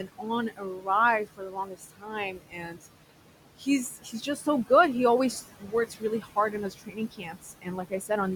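Throughout the clip the background noise drops away between phrases and swells back under them. These are noise suppressor artifacts: the suppressor pulls the room noise, which sits about 14 dB below the speech, down by about 18 dB, band by band and frame by frame.

At 0.00 to 0.88 s, 1.25 to 2.86 s, 3.59 to 4.70 s and 5.43 to 8.10 s, parts of the speech turn faint and swallowed, dropping by about 14 to 18 dB. This is speech cut by the noise suppressor, which mistook quieter speech for noise. Roughly half a second is lost in the first span, around a second in each of the second and last, and a few tenths of a second in the third.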